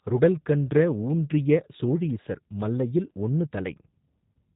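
Throughout, G.729 codec coding rebuilds the speech from a few pulses, sounding rough and synthetic, with the spectrogram empty above 4 kHz, which fits an 8 kbit/s VoIP link.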